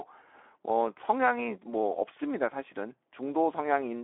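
From start to finish the speech carries Speex codec damage, and it's plainly audible. Speex is a CELP coder, and at a low rate, here sounding like roughly 11 kbps, there aren't many bits left for the excitation signal, so voices come out noisy and hoarse. The audio also sits in a telephone-style band of about 300 Hz to 3.5 kHz, with nothing at all above 3.8 kHz, which makes everything sound narrow and boxy.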